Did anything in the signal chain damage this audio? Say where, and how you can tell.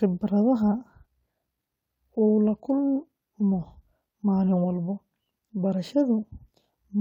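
No, nothing in the chain did.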